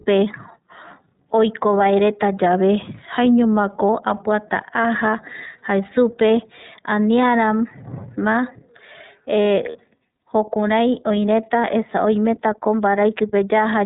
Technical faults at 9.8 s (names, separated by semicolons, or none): iLBC codec; lost iLBC frames